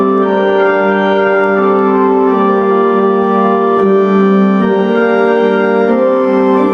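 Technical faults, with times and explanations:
Throughout, gain pumping: the level keeps swinging somewhere around 10 dB. Loud and quiet moments sit squeezed close together, so the whole thing feels flattened. The likely cause is input gain cranked well past what the mic needed, with a fast limiter or compressor clamping down on each peak and then letting go.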